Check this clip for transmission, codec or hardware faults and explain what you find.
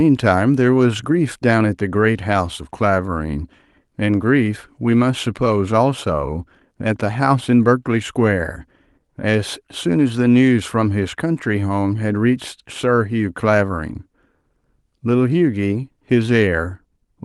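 No transmission, codec or hardware faults are audible anywhere in the recording. The speech has gone through a normal call path, and its high end stops at about 12 kHz, which fits a super-wideband call codec such as Opus at a moderate bitrate.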